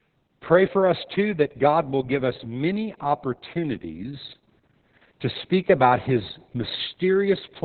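From start to finish the speech is carried by heavy Opus voice compression, running in its SILK linear-prediction mode. The band is squeezed to narrowband, with nothing above about 4.4 kHz, so everything sounds muffled and phone-like. The excitation is coded so coarsely that the voice turns hoarse and a bit robotic. That level of damage fits a very low bitrate, somewhere around 6 kbps.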